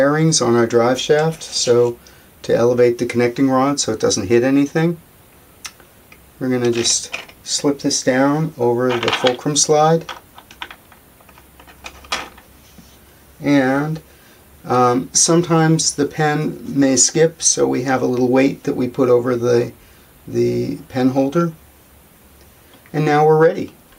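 No technical faults can be heard in this audio.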